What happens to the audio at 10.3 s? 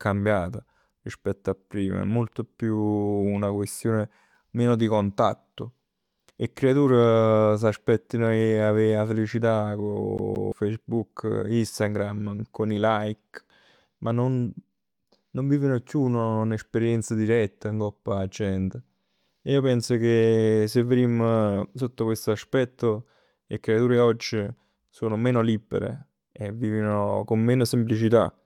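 Just after "'e avè 'a felicità", from 10.18 to 10.52 s, the speech hits a CD stuck on one turn: the pickup jumps back one track and replays the same 172 ms fragment twice, with a brief mute at each jump, giving a rapid, even stutter.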